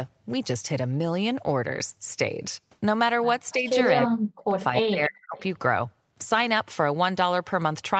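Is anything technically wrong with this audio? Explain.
Yes, two faults are audible.

Speech suppressed in double talk: at 3.54–3.67 s the level dips slightly, by about 5 dB. From 4.08 to 5.38 s it drops much harder, by about 40 dB, with roughly a second affected. This is likely the echo canceller turning everything down while both sides spoke.

Echo leak: brief scraps of the voice return 288 ms late, at 4.76–4.81 s and 5.37–5.42 s. The first is loud, about 5 dB below the speech, and the second is faint, about 25 dB below. The canceller likely did not fully remove the loudspeaker pickup.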